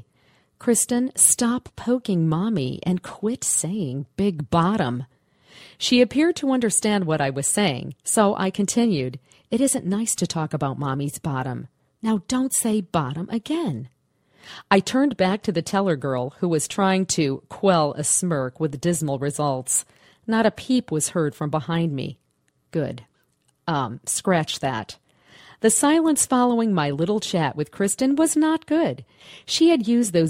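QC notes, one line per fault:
No faults were found in this audio. Nothing in the sound calls for a QC entry.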